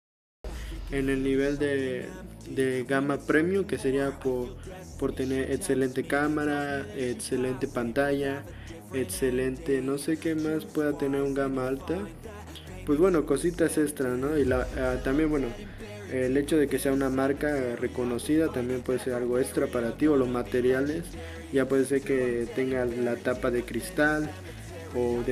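The capture began late, so the first 0.44 s is digital silence and the sound enters abruptly at 0.44 s, already in progress. This cut-off start removes any natural attack or gradual onset, so the audio seems to switch on mid-event.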